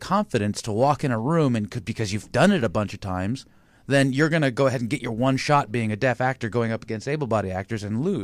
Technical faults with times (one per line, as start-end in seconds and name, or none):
none